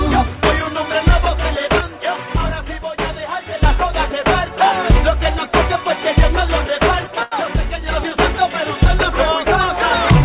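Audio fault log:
1.81–3.63 s and 7.07–7.89 s, one channel drops out: the sound falls abruptly by about 6 dB and recovers at each boundary, the drop you get when a stereo pair is summed to mono with one side missing. Likely cause is one channel being lost, taking with it anything present only on that side.
7.23–7.34 s, short stall from a late packet: the sound is held for 89 ms, overlapping the second level drop, then continues from the same point with nothing skipped. A packet arrived late, the jitter buffer ran dry, and the receiver stretched the last audio until it caught up, adding 89 ms of delay.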